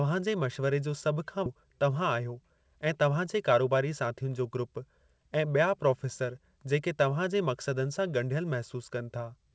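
A skip ahead at 1.46 to 1.48 s opens the faults in this speech recording: about 0.7 s of audio is lost, likely dropped when an overfull jitter buffer discarded it, and the two sides of the jump join with no gap filled in. Jitter buffer speed-up follows from 1.55 to 3.75 s, with the receiver cutting out short pitch-period pieces again and again to shed around a fifth of a second of delay, so the speech runs at 109 percent speed at unchanged pitch and sounds hurried. Through the whole clip nothing reaches above 8 kHz, which fits a G.722 call codec at 64 kbps.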